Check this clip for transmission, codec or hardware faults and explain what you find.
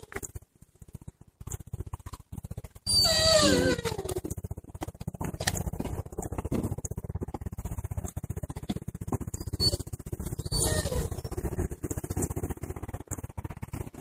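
Two kinds of fault turn up: one skip ahead and three jitter buffer speed-ups.

Skip ahead at 2.35 to 2.37 s: roughly a second of audio was dropped while later audio sat waiting, so playback jumps straight across with no gap.

Jitter buffer speed-up at 2.73 to 2.96 s (117%, around 40 ms trimmed), 7.07 to 7.72 s (107%, around 50 ms) and 12.87 to 13.93 s (114%, around 150 ms): the buffer held too much and shed short pitch-period slices to catch up, so the sound rushes forward at unchanged pitch.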